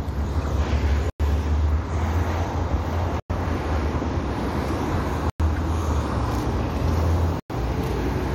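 At 0.42 s there's a quick blip: a corrupt frame decoded, with a couple of damaged frames played anyway so energy lands at the wrong frequencies. From 1.10 s you get gaps between chunks: 100 ms holes at 1.10, 3.20, 5.30 and 7.40 s, where playback pauses after each 2 s chunk. Between those, at 5.56 to 5.58 s, another corrupt frame decoded squeaks briefly across a few frames.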